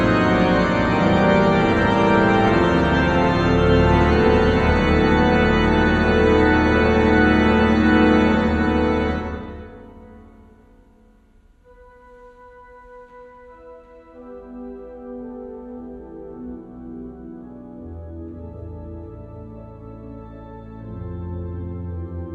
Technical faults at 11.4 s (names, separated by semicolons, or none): doubled audio track